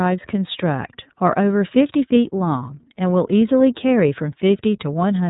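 Speech coded throughout with the iLBC codec, plainly audible as a rough, synthetic edge; the spectrogram shows nothing above about 3.8 kHz, and the sound fits 13.33 kbps with 30 ms frames.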